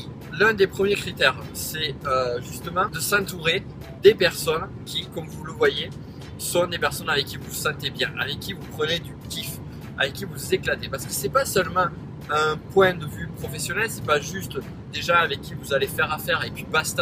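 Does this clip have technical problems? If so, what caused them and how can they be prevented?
No, nothing technical gets in the way here, so there's no cause to track down and nothing that needs preventing.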